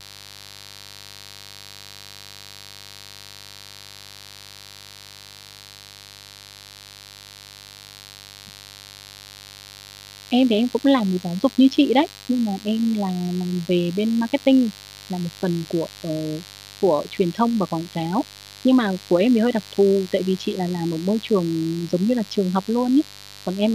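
Switching spikes from unshielded or dimmed 50 Hz mains get into the speech path throughout, adding a steady, raspy mains buzz about 25 dB below the speech.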